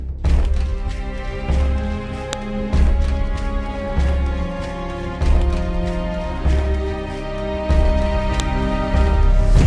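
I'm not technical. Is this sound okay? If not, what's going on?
No. File header played as audio at 2.33 s and 8.40 s: the sound was joined from separate pieces, and each piece's leftover file data plays as a sharp click.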